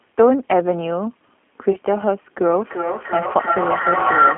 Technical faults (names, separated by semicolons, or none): G.729 codec; VoIP packet loss concealed by the speech codec; feedback howl